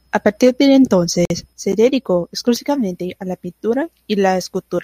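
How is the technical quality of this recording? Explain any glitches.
The recording has one glitch, a gap at a join of encoded pieces, from 1.25 to 1.30 s. The speech appears to have been encoded in separate chunks and stitched together without trimming, so the encoder's start-up delay and the padding of the previous chunk's final frame both remain in the file. The result is a silence of about 50 ms cutting into continuous speech, with smeared edges. The speech then resumes exactly where it stopped.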